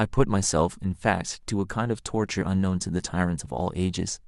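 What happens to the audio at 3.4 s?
At 3.40 s there's a tiny skip in the speech. That's an overlap between stream segments. Two chunks claim the same moment, so the player trims the overlap, dropping a few milliseconds of real audio, and the waveform jumps. The stream uses 1-second segments.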